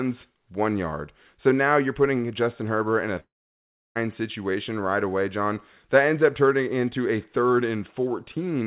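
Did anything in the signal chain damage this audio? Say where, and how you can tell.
Yes, at the network stage. After "in a", from 3.2 s to 3.97 s, the last sound smears into a fading buzz, then goes silent before "situation right away" returns with audio lost. That concealment tail, rather than a clean cut, marks a likely long network dropout.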